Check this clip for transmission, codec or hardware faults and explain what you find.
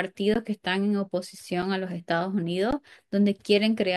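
Three short dropouts, all an underrun with held sample, occur at 0.34, 1.62 and 2.71 s, lasting 15, 5 and 15 ms. The output buffer ran dry and the converter froze its last value, so the speech briefly stops. Roughly as much live audio was skipped. On a waveform each appears as a flat segment, and on a spectrogram as a brief blank strip.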